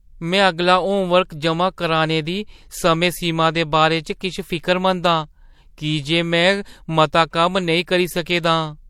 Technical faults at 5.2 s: transcoding between lossy codecs

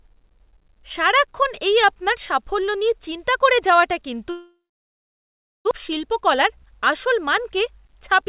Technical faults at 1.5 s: none

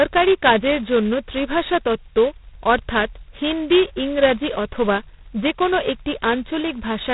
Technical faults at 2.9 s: G.726 ADPCM

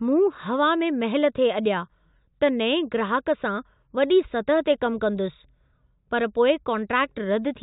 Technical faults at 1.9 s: none

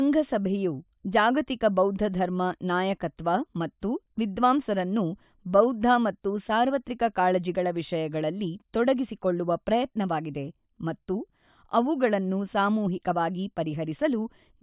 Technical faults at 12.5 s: none

